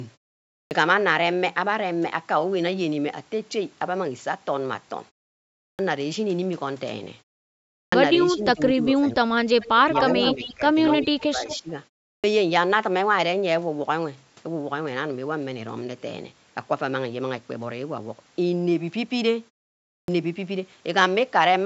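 At 0.66, 5.74 and 7.88 s, each after a pause of roughly half a second or more, a clipped start after a pause removes about 45 to 50 ms of onset as the output device wakes. The waveform jumps straight from flat silence to full level.

From 8.27 to 9.32 s, and again at 9.85–9.94, 10.16–10.65 and 11.08–11.69 s, speech is suppressed in double talk, likely because the echo canceller ducks the talker when both sides overlap. The spectrogram shows energy thinning or dropping by up to about 25 dB.

Within that stretch, at 9.61–9.68, 10.26–10.54, 10.87–11.06 and 11.48–11.59 s, echo leak likely lets a copy through, delayed by 235 ms. It appears as a weaker, offset repeat of the preceding pattern, at about 5 to 20 dB below the speech.

Further clipped starts follow at 12.19 and 20.04 s, again as abrupt vertical edges in the waveform.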